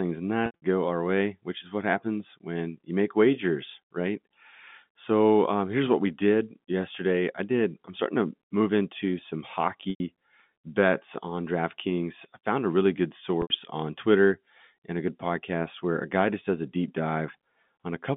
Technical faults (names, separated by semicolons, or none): packet loss with pitch repetition